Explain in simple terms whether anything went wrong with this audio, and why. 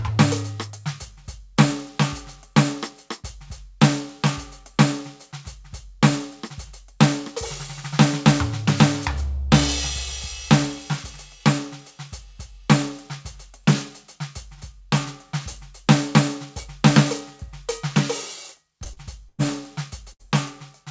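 Near the end of the music, a couple of bits of the call arrived too late. These were short concealed packet losses at 18.84–18.87 s and 18.93–18.99 s. The receiver filled each hole by continuing the sound just before it, so you hear brief smears or wobbles.

Then came two bursts of packet loss, at 19.29–19.40 s and 20.12–20.24 s. In each, about a tenth of a second of audio went missing. The stretched-out filler fades away, and the music picks up further along with that piece gone.

All of this happened over a call connection, which is why nothing above 8 kHz comes through.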